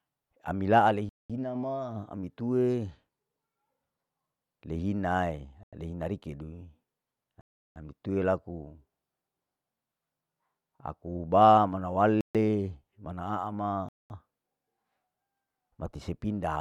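The speech drops to dead silence and resumes at 1.09 s (0.21 s gap), 5.63 s (0.09 s), 7.41 s (0.35 s), 12.21 s (0.14 s) and 13.89 s (0.21 s). These are likely Bluetooth stalls, where interference delayed packets and the headphone buffer ran empty.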